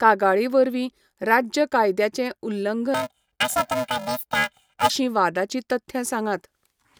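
Planar audio read as interleaved affects this speech from 2.94 to 4.90 s: each short block of about 2.67 ms, which fits a 128-sample block, plays its left half then its right at double speed, producing a robotic buzz at 375 Hz with no clear octave shift.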